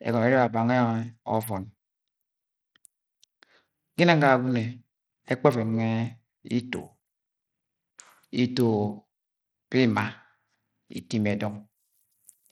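Throughout the clip, Bluetooth SBC compression running short of bits is the likely cause. The upper sub-bands go empty and the rest are coarsely quantised, which fits a rate near 80 kbps. The speech's treble flickers in and out beneath a plainly audible gritty grain.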